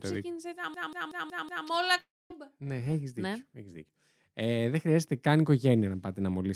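A system hang loop runs from 0.74 to 1.67 s: the playback side froze while the sound hardware kept replaying one 186 ms slice, which fits an 8192-sample buffer. It repeats five times as a machine-gun stutter at 5.4 Hz, with essentially no speech lost.

A long network dropout follows from 2.00 to 2.32 s, likely from packets that never arrived. About 300 ms of speech is missing; the gap is filled by a brief fading continuation, then roughly 240 ms of silence, before the voice resumes further on.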